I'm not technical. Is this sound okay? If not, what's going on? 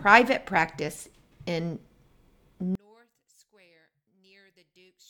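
No. One channel inverted, from about 2.75 seconds to the end: at that point the sound suddenly drops to almost nothing. The likely cause is that one side of the stereo pair has been flipped upside down, so when both sides are combined into one, whatever they share cancels itself out. What remains is only the small difference between the two sides, which is why the sound becomes so faint.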